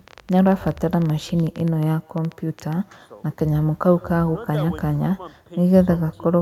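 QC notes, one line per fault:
Throughout: echo with no canceller. Every stretch of speech is trailed about 150 ms later by a faint copy, roughly 29 dB below the direct sound, thinner than the original. The far end's loudspeaker output reaches its microphone and returns uncancelled. That low level makes it a faint, separate repeat rather than a prominent one. A spectrogram shows faint duplicate formant traces offset slightly to the right of each syllable. The waveform shows low ripples continuing into each pause.
0.08 to 2.74 s: train of clicks. About thirty sharp ticks arrive at an irregular pace averaging 11.3 per second, with peaks around the level of the speech itself, so they stay audible over talking and in gaps alike. Because they all have much the same shape and come so closely packed, the likely source is electrical interference or a faulty connection or power supply. On a spectrogram they form thin vertical broadband lines, and on the waveform isolated narrow spikes.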